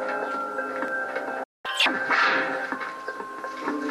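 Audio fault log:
1.43–1.66 s, playback stall: the sound stops mid-flow and the output goes silent for about 205 ms before resuming. This is likely the player running out of buffered data or its playback thread being blocked, leaving nothing to output until it recovered.
1.66–1.86 s, catch-up at higher speed: immediately after the gap, the sound plays at 2x speed, with pitch raised by roughly ten semitones. The player is resampling its accumulated backlog to recover lost time, so tempo and pitch rise together.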